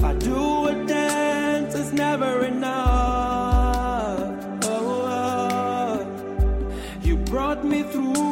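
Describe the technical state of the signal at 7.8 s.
At 7.8 s the signal is intact, with no audible dropout, distortion, glitch or other fault.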